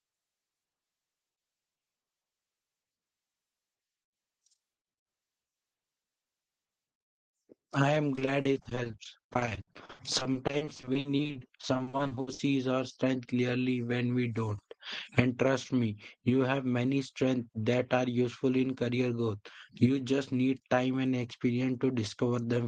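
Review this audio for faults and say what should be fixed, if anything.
From 8.15 to 12.41 s, between "I am" and "our strength clearly when", the speech turns choppy and robotic with pieces missing. This is repeated packet loss (robotic sound): a rapid run of gaps up to 60 ms, each patched by extending the previous sound, covering about a third of that stretch. A steadier network path, a jitter buffer with more headroom, and in-band forward error correction in the codec would prevent it.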